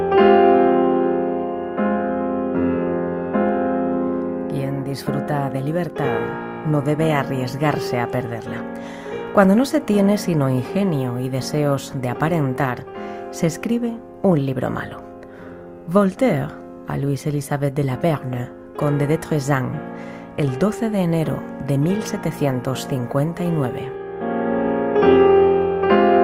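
No technical faults can be heard anywhere in the audio. Nothing in the sound points to a problem in how it was captured, processed or played back.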